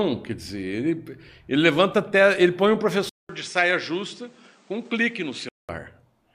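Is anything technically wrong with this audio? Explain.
Yes. From 3.09 s to 5.69 s the speech turns duller and about 5 dB quieter, with nothing above 9.7 kHz, a new background noise roughly 30 dB below it, and a 200 ms gap at the switch. The likely cause is the input switched to a poorer device, whose narrower band and own noise replace the original microphone.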